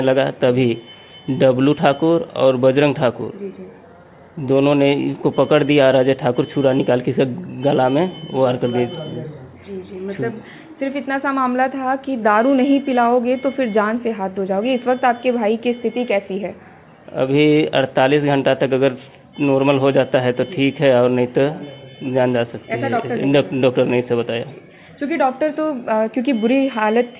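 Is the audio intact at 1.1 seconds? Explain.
Yes, at 1.1 seconds the audio is intact, with no dropout, glitch or other fault at that moment beyond the narrowband sound of the call path, which carries nothing above 4 kHz.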